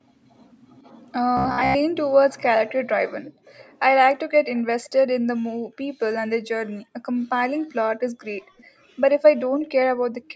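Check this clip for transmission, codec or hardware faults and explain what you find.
Two kinds of fault can be heard in this speech: one stretch of robotic sound and several short bursts of echo leak.

Robotic sound from repeated short buffers, 1.37 to 1.76 s. The likely cause is audio arriving too late, so the receiver keeps replaying a short slice in place of most of this stretch. The repeat rate stamps a fixed 66.8 Hz buzz onto the voice, which fits a slice of about 15 ms. The result is a rigid, metallic drone that only loosely follows the speech.

Echo leak at 3.25 to 3.75 s, 4.55 to 4.63 s, 4.83 to 4.90 s, 8.57 to 8.64 s and 9.59 to 9.69 s. A faint, delayed copy of the speech returns between 419 and 448 ms after the original. It most likely comes from a loudspeaker on the far end whose echo canceller let some sound through. Most scraps sit about 30 to 35 dB below the speech. The last is stronger, at about 20 dB below. 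Across the clip, nothing is present above 8 kHz, which is consistent with the call's microphone processing.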